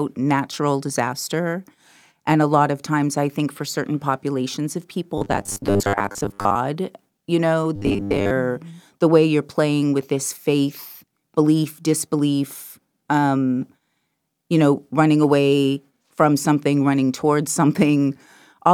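Speech with robotic sound from repeated short buffers at 5.18–6.56 s and 7.76–8.33 s: a rigid 100 Hz metallic buzz, likely from 10 ms chunks looping while real audio is skipped (about half, then most). Spectrograms show flat 100 Hz-spaced harmonic lines; waveforms show identical repeating blocks.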